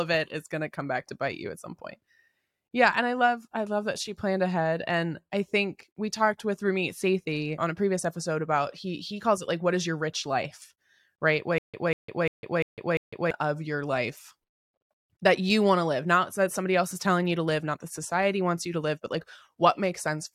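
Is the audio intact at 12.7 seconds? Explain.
No. From 11.58 to 13.31 s there is stutter with silent gaps: a 193 ms burst repeats five times every 347 ms, separated by 154 ms of digital silence. This is likely a stalled stream replaying its last fragment. The waveform shows identical blocks separated by flat zero-line gaps, and the spectrogram shows repeated matching patches with blank columns between them.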